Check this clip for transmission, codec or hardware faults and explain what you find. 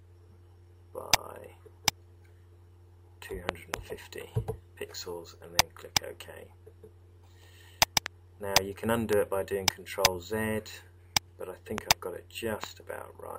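The clip has one hardware-type fault, loud pops, occurring five times. Loud pop: a double pop from 3.49 to 3.76 s, then single pops at 8.06 to 8.08 s, 9.13 to 9.15 s, 11.78 to 11.80 s and 12.64 to 12.66 s. A sudden voltage step or pulse, likely from a connector, switch, static discharge or driver glitch, enters the signal path and is shaped by the following circuitry. Each is heard as a sharp pop about 20 to 25 dB above the sound, which continues underneath.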